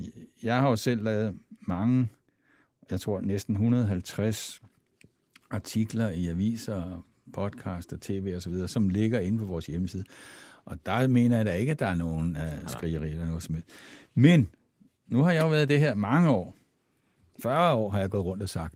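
Speech with no technical faults; the Opus voice compression leaves only a light coding texture while keeping the full audio band.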